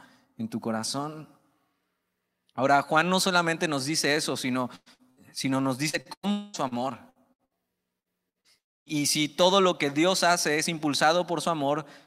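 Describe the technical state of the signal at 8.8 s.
At 8.8 s two faults overlap. Repeated packet loss (robotic sound) runs from 5.89 to 8.88 s. Ten separate gaps, the longest 98 ms, are patched by extending the preceding audio. Roughly a fifth of that stretch is concealed, so the speech turns choppy, with fragments missing.

Overlapping the end of that stretch, a long network dropout is the likely cause of the hole from 8.58 to 9.01 s. The last sound is stretched into a fading buzz or hiss, then about 260 ms of near-silence follows before audio resumes. About 280 ms of the original is lost.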